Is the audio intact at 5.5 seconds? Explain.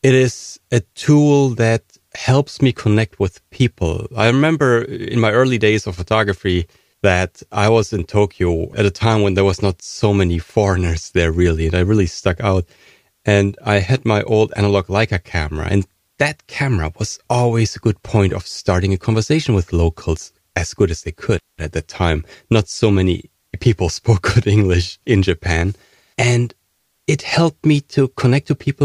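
Yes, the speech at 5.5 seconds plays through cleanly, with no dropout, glitch, distortion or other fault at that point.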